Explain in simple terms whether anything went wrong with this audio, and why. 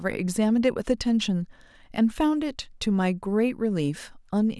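Nothing went wrong here: the speech comes across with no audible technical fault at any point.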